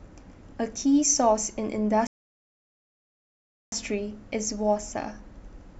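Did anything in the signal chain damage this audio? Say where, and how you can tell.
Yes, a rebuffering stall at the playback stage. The speech drops to dead silence from 2.07 to 3.72 s, then resumes exactly where it stopped, adding 1.65 s. The player's buffer ran dry, so the waveform shows a flat gap and the spectrogram a blank column.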